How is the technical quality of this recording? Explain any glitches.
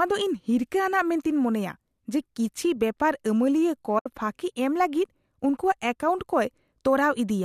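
The speech has one glitch, a brief soft dropout. From 3.99 to 4.06 s there is AAC frame loss with muting. The decoder zeroed the missing audio, which fits about seven lost frames, roughly 70 ms. Overlapping windows fade it out and back in, so the hole is soft-edged. Light coding texture is audible throughout, likely from low-delay AAC compression.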